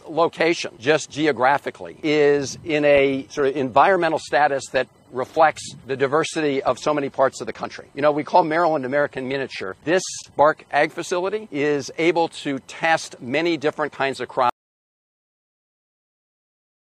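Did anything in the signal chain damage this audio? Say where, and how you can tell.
Yes. From 2.70 s to 10.70 s codec artefacts rise, with more smearing and warble. The change is abrupt at both ends, and there is no gap in the sound. This is an adaptive stream at a lower bitrate, a network-stage problem. When throughput fell, the player switched to a leaner rendition of the stream and then switched back. The loss of detail fits AAC dropping from about 96 kbit/s to around 32 kbit/s.

At 14.50 s the sound cuts off mid-flow and never returns. From there to the end it is silence, with no room tone or noise floor left, so the audio in that stretch is simply gone. This is an audio dropout to silence. The likely cause is lost input before the recorder or encoder, such as a disconnected device, a failed link or an accidental mute, with the chain continuing to write silence.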